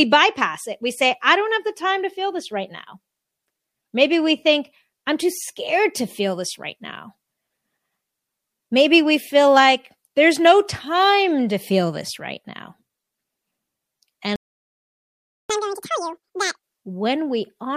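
A playback stall hits this speech recording at 14.36 s: the sound cuts off mid-flow and stays silent for about 1.14 s, until 15.50 s, most likely because the player ran dry of buffered data or its output thread was blocked. Catch-up at higher speed follows from 15.50 to 16.63 s. The player resamples its backlog at 2.0 times normal speed to recover the lost time, so the speech rushes and rises roughly ten semitones in pitch before snapping back to normal rate.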